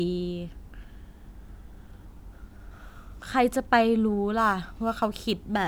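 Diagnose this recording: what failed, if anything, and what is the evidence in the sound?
Crude rate conversion sets in at 4.38 s and runs to the end of the clip at 5.67 s, a failure in the sample-rate conversion stage. From that point the speech picks up a gritty, inharmonic fizz that rides on the louder and brighter sounds. The grit points to samples being dropped or repeated on a nearest-sample basis with no anti-aliasing filter, which fits a 48 kHz to 44.1 kHz change. The periodic error lands roughly 30 dB below the speech and produces shifted, inharmonic copies of it.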